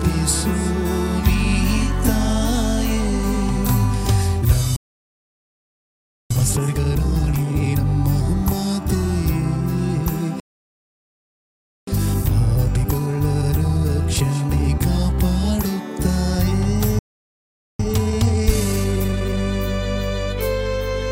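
The player likely ran short of data or had its thread blocked three times, causing playback stalls that silence the audio at 4.76–6.31 s, 10.40–11.87 s and 16.99–17.80 s. Each stall is followed by time-compressed catch-up, where small pieces are cut and cross-faded so the sound rushes at normal pitch: 2× from 6.31 to 7.85 s, 1.25× from 11.87 to 14.87 s, and 1.5× from 17.80 to 19.40 s.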